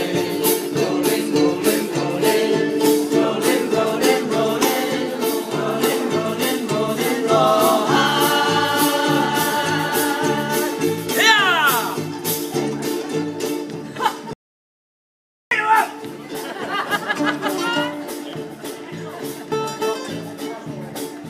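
At 14.33 s the audio drops out to silence. It stays dead for about 1.18 s, until 15.51 s. The gap is silent, with no room tone. The input was likely lost while recording continued, so that stretch of sound is gone.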